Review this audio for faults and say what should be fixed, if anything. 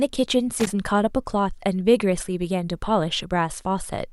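Loose connector crackle runs from 0.6 to 0.73 s, a short irregular burst of scratching over the speech. A worn or dirty contact is briefly making and breaking, chopping the signal. Clean or replace the connector and secure the cable so it cannot move.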